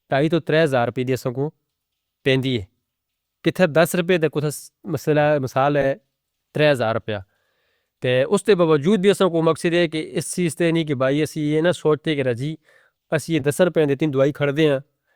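A speech clip with frames out of order at three points: 4.53–4.58 s, just after "دس روپئے دے کتے", where two 20 ms runs swap places; 5.81–5.84 s, where two 10 ms blocks trade positions; and 13.39–13.45 s, between "کہ راضی اسی یہ" and "دس روپئے دے تین". Each sounds like a brief garbled flutter. Unlike a dropout or repeated frame, nothing is lost or duplicated and the timing stays intact.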